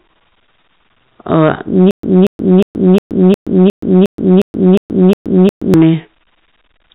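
Throughout, a gain stage overdriven by about 10 dB causes hard clipping: a few percent of peaks are sliced flat, adding a harsh crackling fuzz through this band-limited telephone speech. From 1.91 to 5.74 s, a stalled stream likely causes stutter with silent gaps: an identical 233 ms burst repeats eleven times, each followed by 125 ms of dead silence, while the intended speech is lost.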